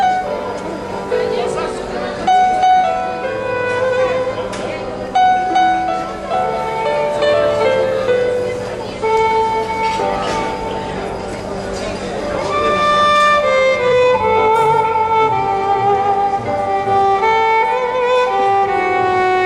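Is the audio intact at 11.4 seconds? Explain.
No. At 11.43 s there is damaged data in the compressed stream: a run of bytes in the encoded file arrives corrupted, so the decoder misreads those frames, loses its place in the bitstream and has to hunt for the next valid frame header before decoding resumes. The bad stretch is less than 20 ms long, and it is heard as a brief chirp, click or short hole in the sound.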